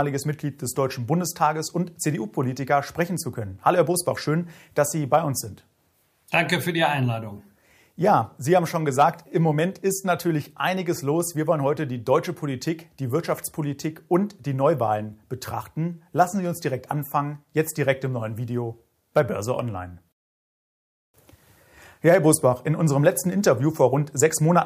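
No technical faults can be heard anywhere in the recording, and the signal stays steady and intact throughout.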